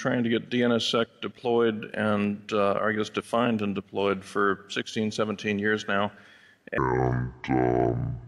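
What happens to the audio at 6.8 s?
At 6.78 s the sound abruptly turns deep and sluggish, and it stays that way until the clip ends at 8.27 s. Everything plays at about 0.615 times its original rate, so timing stretches out and pitch drops by roughly ten semitones, just short of an octave. This is a section at the wrong speed, likely because that stretch was played back or resampled against the wrong clock, which shifts pitch and tempo together.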